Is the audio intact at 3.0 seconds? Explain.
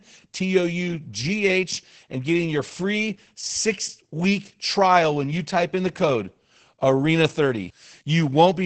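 No. At 3.0 seconds, as throughout, the speech sounds muffled, hoarse and slightly robotic, with nothing above 8.5 kHz. This is heavy Opus voice compression from SILK's coarse excitation coding, which fits a bitrate near 10 kbps.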